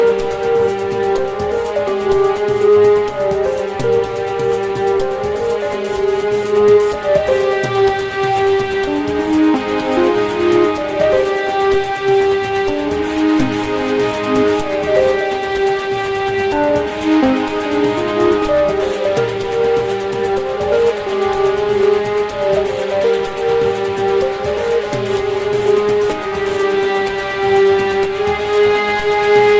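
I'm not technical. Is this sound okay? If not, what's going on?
Yes, this sound is okay; nothing is going wrong in it.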